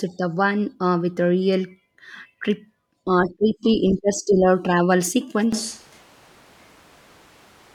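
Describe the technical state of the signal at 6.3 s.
At 6.3 s the speech sounds roomy and hollow, with thinner bass. It has been that way since an abrupt change at 5.53 s, lasting to the end. The level drops by about 10 dB, and room noise sits only about 25 dB below the speech. This is likely a switch to a distant microphone, after the close microphone's signal was lost.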